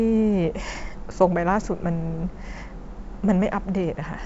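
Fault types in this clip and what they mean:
There are no fault types in this clip; the G.722 wideband coding at 64 kbit/s works as intended.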